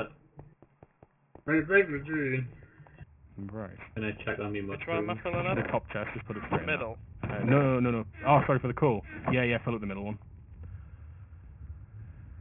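Aliasing runs through the whole clip. Everything sits inside a band that stops hard at about 3 kHz, and the top end sounds gritty and metallic rather than just dull. That points to a drop from 44.1 kHz to 6 kHz with no anti-alias filter first. Content above 3 kHz hasn't been removed. It's folded back down as wrong, unrelated tones, roughly 15 dB below the wanted sound, scattered through the band below that edge.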